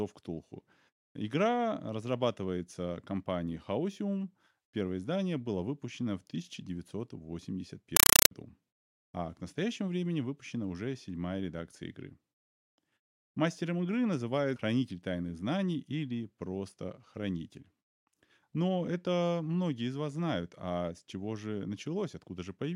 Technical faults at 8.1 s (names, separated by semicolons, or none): compressed stream played as audio